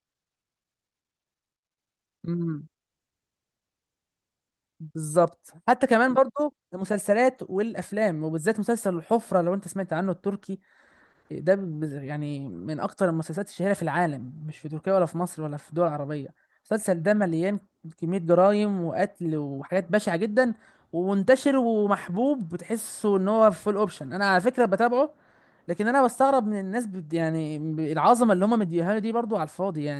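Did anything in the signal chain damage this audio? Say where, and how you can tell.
No, nothing in the chain audibly damaged this speech recording: no stage from capture through to playback has left any mark on the signal.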